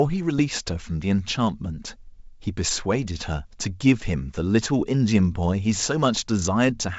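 At about 0.38 to 0.42 s there's a short burst of bit errors on an ADPCM link, likely the 64 kbit/s G.722 path. A few flipped bits knock the decoder's step size and predictor off, so you hear a brief pop and rough, wobbly level.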